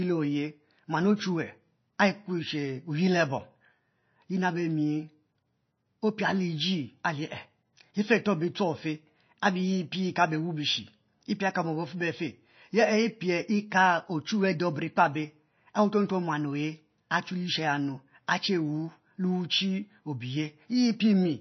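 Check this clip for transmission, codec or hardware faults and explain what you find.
There's one fault, running through the whole clip: the sound has no content above 6 kHz, and the s sounds have a watery, swirly edge. That's likely MP3 compression at a very low bitrate, somewhere around 26 kbps. Short on bits, the encoder chops the treble off and lets weak frequency lines flicker on and off between frames.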